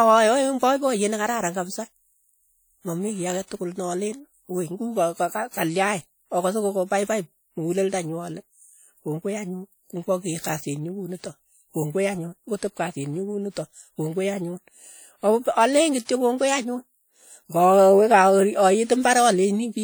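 Across the whole speech recording there is plainly audible WMA compression: a ringing, washy quality with hiss that swells and fades with the signal. The likely cause is a long-block transform encoder whose quantisation noise smears over tens of milliseconds, consistent with a bitrate near 48 kbps.

From 16.05 to 16.09 s, pre-echo is audible: a short hiss arrives about 40 ms ahead of a sharp attack, which then sounds softened. The coding noise sized for the loud onset was spread across its whole block, filling the quiet gap before it.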